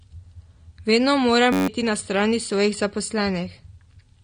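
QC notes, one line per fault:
Throughout, AAC compression: the top end stops dead around 9.7 kHz, and the damage is plainly audible. The speech sounds dull and a bit smeared, with a fizzy, warbly edge on sibilants and held sounds. This is likely AAC-LC at a low bitrate, something like 32 kbps, where the encoder pulls its cut-off down and starves the upper bands, leaving gaps or noisy fill where detail used to be.
1.53–1.68 s, system hang loop: a tiny slice of audio repeats back to back about 14 times, each pass 10.67 ms long. That makes a steady buzz at roughly 93.8 Hz instead of speech. The machine stalled while the sound hardware kept replaying the same short ring buffer, and the loop length fits a 512-sample buffer. Around 150 ms of real audio is gone under the buzz.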